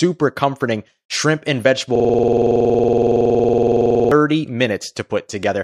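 Just after "comforting shrimp and", from 1.95 s to 4.12 s, a system hang loop takes over. The playback system froze while the audio hardware kept replaying its ring buffer, so one 46 ms slice, which fits a 2048-sample buffer, repeats identically about 47 times. At 21.5 Hz the result is a rough, rattling buzz. The repeats are exact copies at a fixed rate, with no gaps or variation, which sets this apart from irregular network dropout stutter.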